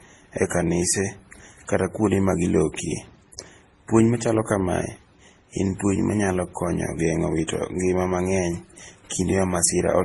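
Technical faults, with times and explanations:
Throughout: transcoding between lossy codecs. The speech carries the artefacts of three codecs at once, and nothing above 12.1 kHz. This likely comes from a low-bitrate MP3 stage re-encoded through AAC and then Opus, each adding its own artefacts while the lowest band limit in the chain remains.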